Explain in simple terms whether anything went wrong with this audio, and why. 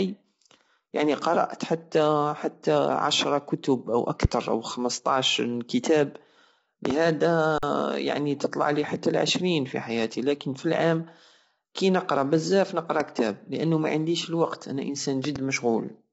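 The sound passed through low-delay AAC compression, likely the AAC-ELD codec used for video calls, squeezed into too little data. Its very short processing chunks capture speech poorly, so throughout the clip voices sound rough and grainy, and everything above about 7.8 kHz is missing, leaving them dull.

A sudden electrical jolt, likely from a plug, switch, static or driver glitch, was added to the signal, causing loud pops over the speech: one at 4.25 to 4.27 s, a double pop at 6.85 to 6.93 s, one at 13.00 to 13.03 s between "كي نقرى بزاف نقرر" and "كتاب لانو معنديش الوقت", and another double pop at 15.25 to 15.38 s after "لانو معنديش الوقت أنا". The speech carries on underneath each one.

At 7.58 to 7.63 s there is an underrun with held sample. The playback system ran out of audio for about 46 ms, which fits a 2048-sample buffer, and held its last value frozen. The sound briefly goes flat, then resumes just before "يعني تطلعلي حتى لعشرين", with roughly 50 ms of speech lost.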